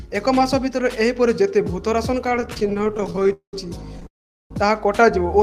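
From 2.26 to 3.31 s the sound breaks into repeated stalls (stutter): 31 tiny holds, none longer than 17 ms, filling about a third of that stretch. Packets kept arriving late, so the jitter buffer ran dry repeatedly. Unlike a freeze, it judders rather than stopping outright, and nothing is lost.

Two call audio freezes follow, at 3.33 to 3.54 s and 4.07 to 4.51 s. The last sound is held as a brief buzz or hiss that fades to silence for about 110 ms and 400 ms, then the audio resumes where it stopped, 203 ms and 438 ms late. The likely cause is packets held up long enough to empty the jitter buffer. Each is one long gap, not many short ones.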